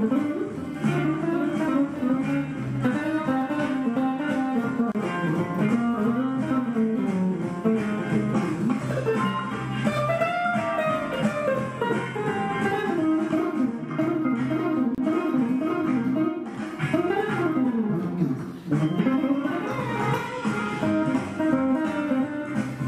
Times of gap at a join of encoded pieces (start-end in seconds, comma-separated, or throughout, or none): 4.92-4.95, 14.95-14.98